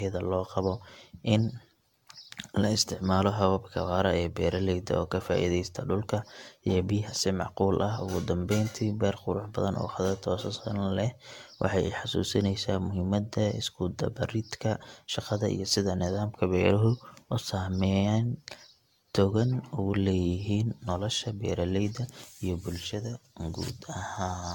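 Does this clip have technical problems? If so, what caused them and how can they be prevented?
Yes. Generation loss runs throughout the speech: swirly, hollow texture with smeared consonant attacks, likely from around ten repeated lossy encodes, consistent with an AAC-LC chain near 96 kbit/s. A spectrogram shows nothing above 17 kHz and patchy holes between bands. To prevent it, keep a lossless master and encode to a lossy format only once, at the final step.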